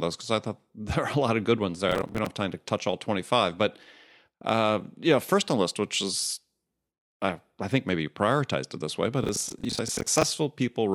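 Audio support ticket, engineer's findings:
Gritty tearing crackle over the speech, 1.89 to 2.26 s and again 9.24 to 10.23 s. Processor overload crackle: audio thread missing deadlines on buffers of around 10 ms, roughly 20 and 30 misses, each miss replaying stale audio with hard edges. Clears when load drops.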